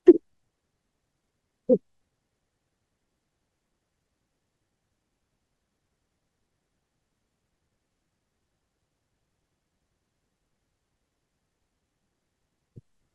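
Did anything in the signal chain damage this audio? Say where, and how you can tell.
No, nothing in the chain has audibly damaged this speech recording; the signal stays continuous and stable throughout, with no stage leaving a mark that can be heard.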